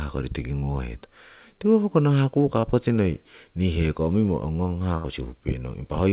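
At 0.59 s and 2.60 s, short concealed packet loss fills about 30 ms with extended sound, heard as a brief smear. From 4.97 to 5.07 s, a burst of packet loss drops about 60 ms. A fading continuation of the last sound bridges it, seen as a decaying envelope before the audio resumes further on. Throughout, the spectrogram stays empty above 4 kHz, which points to a narrowband G.711-style call path.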